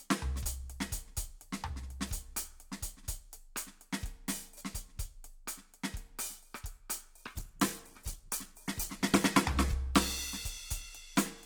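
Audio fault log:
7.17–9.85 s, call bitrate drop: the music loses its top end and turns coarse and watery, and the lowest rate lasts about 2.6 s before the sound recovers. The call's bandwidth estimate fell, so the encoder had to spend far fewer bits, quantising the music more roughly and cutting off the high frequencies. The sound points to a fall from roughly 128 kbps to about 13 kbps.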